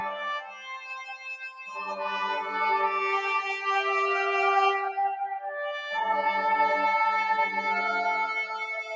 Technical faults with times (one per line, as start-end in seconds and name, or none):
0.00-8.96 noise suppressor applied to music or sounds
0.39-1.97 sound cut by the noise suppressor
5.20-5.58 sound cut by the noise suppressor